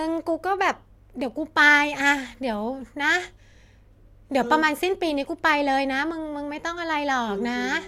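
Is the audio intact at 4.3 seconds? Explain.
Yes, the speech at 4.3 seconds plays through cleanly, with no dropout, click, distortion or other fault at that point.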